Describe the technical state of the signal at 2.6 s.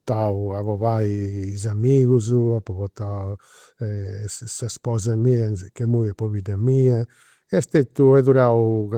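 At 2.6 s the signal is intact, with no fault present, and the light Opus voice compression carries on normally through that moment.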